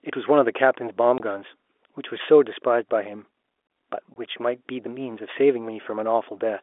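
Packet loss filled with silence occurs at 1.18 to 1.20 s and again at 4.14 to 4.16 s. Each time, a 20 ms stretch of speech drops out completely, which fits a single lost 20 ms packet that the receiver replaced with silence. The cut is abrupt, with hard edges at each end around a brief hole.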